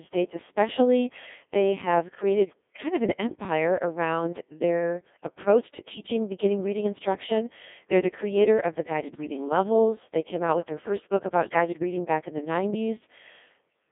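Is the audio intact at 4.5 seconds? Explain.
No. At 4.5 s, as throughout, the speech sounds robotic, buzzy and band-limited to about 250 Hz–3.6 kHz: a Codec 2 vocoder rebuilding the voice from pitch and envelope, consistent with roughly 1.6 kbit/s.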